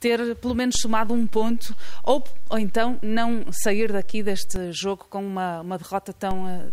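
At 0.75 s the zero line of the waveform jumps by about -17 dBFS, the kind of DC step a converter recalibrating or an offset input being switched in would cause. The offset holds until 4.56 s and then drops back, so there is a low thump at each edge while the sound itself carries on unchanged. A second DC step of about -18 dBFS arrives at 6.31 s, with another thump, and stays until the end.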